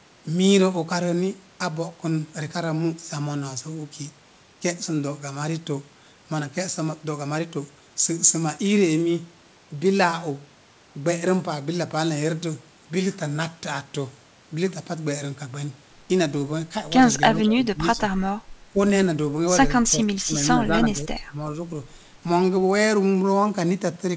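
A speech recording over a call path that stops at 8 kHz, consistent with G.722 at 64 kbps. An echo canceller that likely confused the talker with loudspeaker echo during double talk produces speech suppressed in double talk: the voice sinks by about 10 dB from 17.31 to 18.03 s and from 18.72 to 18.79 s, then by about 20 dB from 19.94 to 21.52 s.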